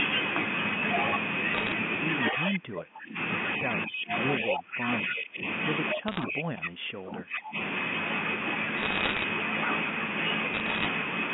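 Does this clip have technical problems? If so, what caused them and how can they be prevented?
Yes. The clip has three kinds of technical fault.

Bit errors on a digital phone line appear at 1.55–1.72 s, 6.08–6.24 s, 8.77–9.24 s and 10.54–10.86 s, at roughly one percent of bits. Each flipped bit corrupts one A-law sample, and errors in the sign or upper bits throw that sample far from its true value, producing a sharp tick. On the waveform these are isolated single-sample spikes. On a spectrogram they are thin vertical broadband lines peppering the speech. Cleaning up the digital transmission path and adding error detection on the link would prevent them.

Echo leak is heard as a delayed repeat of earlier speech at 2.26–2.34 s and 4.47–4.57 s, arriving 236 ms after the original. The first copy is about 10 dB below the speech, and the second is about as loud as the speech itself. It is likely caused by the far end's loudspeaker audio reaching its microphone and passing an echo canceller that did not fully remove it. 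A spectrogram shows a duplicate of the earlier harmonic pattern shifted 236 ms later. A better-converged echo canceller, or a headset at the far end, would prevent it.

Speech suppressed in double talk shows up as the level dropping and the sound thinning or cutting out in pieces at 2.31–3.18 s, 3.59–4.12 s, 4.40–5.44 s and 5.93–7.57 s, with dips of roughly 20 to 30 dB. The waveform envelope drops in these stretches. The likely cause is an echo canceller that could not separate local talk from loudspeaker echo while both sides spoke, so it attenuated everything. A full-duplex canceller with reliable double-talk detection, or headsets, would prevent it.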